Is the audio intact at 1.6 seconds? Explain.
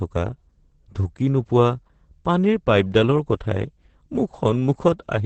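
No. Opus voice compression runs through the whole clip. The speech is squeezed into an 8 kHz band with coarse excitation, which points to about 10 kbps. It sounds muffled, hoarse and slightly robotic.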